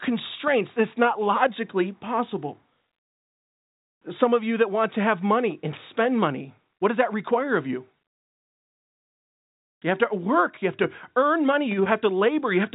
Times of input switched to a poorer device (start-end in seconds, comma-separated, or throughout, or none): none